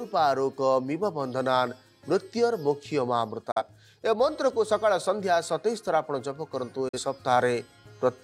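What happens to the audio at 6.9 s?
Right around there you get a digital broadcast dropout, running from about 6.88 to 6.99 s. The receiver stops getting usable frames, so instead of playing garbage it mutes: the sound fades out over roughly 8 ms, sits in silence, then comes back once clean data arrives. About 43 ms of programme just vanishes, which fits a single lost frame. It comes across as a brief, clean hole in the audio rather than a click or crackle.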